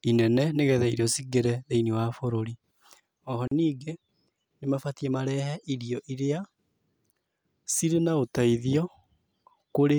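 Speech, with a gap at a join of encoded pieces at 3.48 to 3.51 s. A gap of about 39 ms cuts into continuous sound, with smeared edges. Separately encoded pieces, set about 6 s apart, were joined untrimmed, keeping encoder delay and padding.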